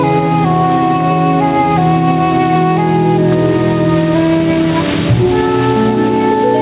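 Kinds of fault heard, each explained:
Gain pumping: Throughout the clip, the gain is pulled down on each loud sound, swinging by around 10 dB. Loud and soft parts sit close in level and sound squashed. The likely cause is gain set far too high, with a fast limiter pulling it down.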